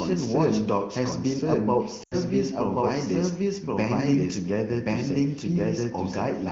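A doubled audio track runs through the whole clip. A second full-band copy of the speech trails the first by about one second, at roughly the same level. The copy is dry, with no decay or room colour, so it is not an echo from a space. Most likely the signal was captured twice, once through a slower path.

At 2.03 to 2.15 s there are lost AMR speech frames. About 80 ms of speech is gone, which fits four consecutive 20 ms frames. The decoder filled the gap by repeating the last good frame while lowering its level. The sound drops to near silence within two frames, as wideband concealment does. When speech returns it sounds weak or rough for a moment. The surrounding wideband speech is clear and only lightly coloured by the codec.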